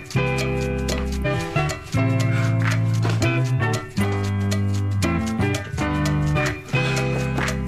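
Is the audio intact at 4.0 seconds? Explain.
No. From 4.00 to 4.05 s there is damaged data in the compressed stream: corrupted bytes make the decoder misread those frames and lose sync while it hunts for the next valid frame header, producing a short chirp, click or hole lasting about 50 ms.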